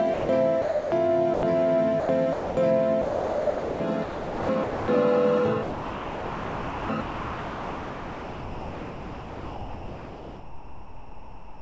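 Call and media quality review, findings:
Doubled audio track, 0.00 to 5.38 s, already under way at start. Full-band copy about 2 s behind at roughly equal level, no decay or room colour, hard stop at 5.38 s. Likely a second capture path or misaligned edit. Spectrogram: same pattern repeated about 2 s later.

Sound dropped by the voice detector, three gaps: 0.14 to 0.29 s (150 ms), 0.62 to 0.92 s (300 ms), 1.34 to 1.43 s (90 ms). Sender VAD likely misread sound as background; comfort noise substituted. Waveform: flat, steady low-level noise blocks. Spectrogram: featureless smooth noise floor.

Sound chopped by the voice detector: 2.00 to 2.57 s (330 ms replaced), 3.02 to 4.88 s (1.47 s replaced), 5.63 s to end (5.87 s replaced, nearly all of it). Sender VAD likely toggling repeatedly, with comfort noise between bursts. Waveform: fragmented envelope. Spectrogram: real detail alternating with smooth synthetic noise.

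Call path: G.722 at a rate consistent with 64 kbps, nothing above 8 kHz on the spectrogram.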